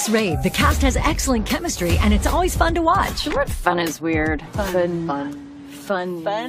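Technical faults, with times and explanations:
No technical fault can be heard in this audio, whose signal keeps its continuity from beginning to end without any disruption.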